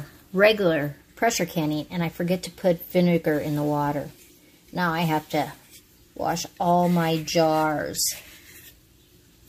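No technical faults can be heard anywhere in this recording.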